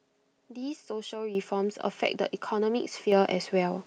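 At 1.35 s the microphone volume is stepped up by about 10 dB in one jump. The call software judged the input too quiet and raised the device gain. Speech and background rise together, abruptly. At 3.12 s it steps up again, by about 5 dB.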